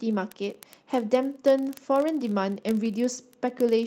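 Speech clip with word clock ticks running from 0.11 s right through to the end. They come roughly every 20 ms, which points to the receiving device free-running on its own clock, off from the sender by something like 0.1 percent, slipping about a sample each time. Separately, at 2.85 to 2.87 s there's a brief rough, noisy patch: a lost packet rebuilt from error correction. The decoder played a low-bitrate backup copy carried in the next packet, so there's no gap, just a coarser 20 ms stretch that fits a single missing packet.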